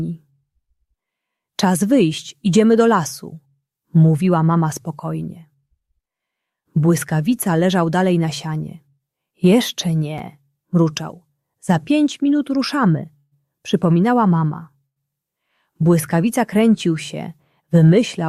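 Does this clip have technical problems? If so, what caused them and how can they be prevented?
Yes. Chunks out of order at 10.18 s: a short block of about 5.3 ms arrived two blocks late and played after the ones meant to follow it. Nothing is missing, but the wrong ordering leaves a brief jumbled instant with hard joins. Prevention: tag each block with a sequence number and reorder on receipt, or make the writing thread wait until earlier blocks are committed.

Call audio freeze at 13.17 to 13.34 s and 14.86 to 14.98 s: the sound stretches into a fading fill, 141 ms then 103 ms long, dropping to silence for about 30 ms and 100 ms respectively, before resuming exactly where it stopped. The likely cause is delayed packets draining the jitter buffer, inserting gaps rather than losing audio. Prevention: use an adaptive jitter buffer with enough headroom and give call traffic network priority to reduce delay spikes.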